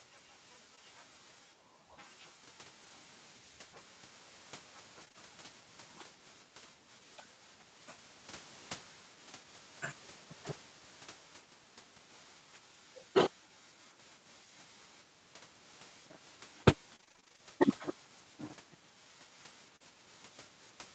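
Speech over an Opus call path whose audio stops at 8 kHz, with three kinds of fault. Short concealed packet loss: audio failed to arrive at 0.75–0.79 s (about 20 ms) and 19.76–19.82 s (40 ms), so the receiver extended the preceding sound, leaving a brief smear or wobble. Lost packet rebuilt from error correction: at 0.77–0.79 s and 2.83–2.93 s the decoder played low-bitrate copies, about 20 ms and 60 ms, the latter sounding like three separate packets, so those moments turn rougher and noisier without a gap. Repeated packet loss: losses recurred at 5.01–5.16 s, in what sounds like three gaps with about a third of the span patched, and at 16.96–17.40 s, in roughly eleven gaps of up to 28 ms with half the span concealed, giving a choppy texture with pieces missing.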